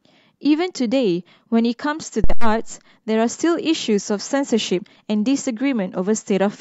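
At 2.24 s a phantom power thump occurs. Phantom power was switched on or off on a live microphone input, and the sudden step in DC voltage passed through the coupling capacitors into the signal path. In the speech this becomes a deep, low thump peaking at about -5 dBFS. Its energy falls away quickly, with a decay of about 79 ms, and the disturbance has settled by 2.59 s.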